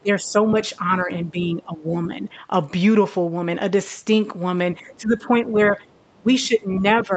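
From the start to 2.35 s, the speech dips repeatedly by up to about 15 dB, for roughly a second in total. This is likely speech suppressed in double talk: the far side was playing on the loudspeaker while this talker spoke, and the echo canceller, unable to tell the two apart, turned the talker down with the echo. The same dipping returns from 4.79 to 5.77 s, about 10 dB at its deepest across roughly half a second.

Inside that stretch, from 4.88 to 4.95 s, a second voice comes through about 30 dB below the speech. This is likely the other side's voice leaking through, the loudspeaker sound the canceller failed to remove from the microphone. A further scrap follows from 6.01 to 6.16 s, about 40 dB down.

From 6.18 s to the end, the talker is again pulled down by up to about 15 dB, likely the same double-talk suppression. Within it, from 6.76 to 7.04 s, the leaked voice is at its strongest, about 20 dB below the speech.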